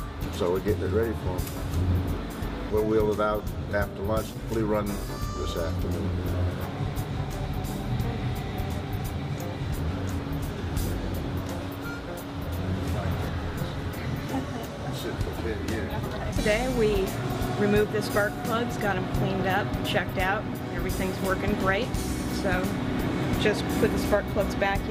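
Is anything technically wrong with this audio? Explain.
No technical faults can be heard.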